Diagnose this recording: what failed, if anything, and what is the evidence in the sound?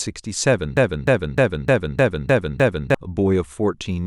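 A broken-record loop runs from 0.77 to 2.95 s: a 0.30 s fragment of the speech repeats seven times back to back, and the audio due in that span never arrives. This most likely points to a playback or streaming buffer stalling and resending its last held block.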